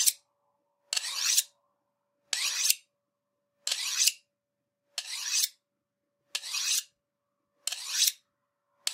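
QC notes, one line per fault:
No audible faults found anywhere in the audio.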